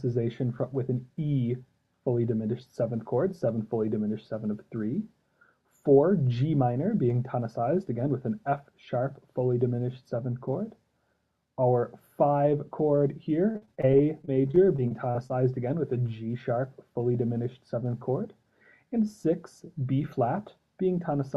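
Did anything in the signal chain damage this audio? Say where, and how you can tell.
Yes, repeated packet loss (robotic sound) at the network stage, 13.51 to 15.31 s: many short holes up to 43 ms, patched by extending prior sound, showing as choppy, stuttering blocks on a spectrogram.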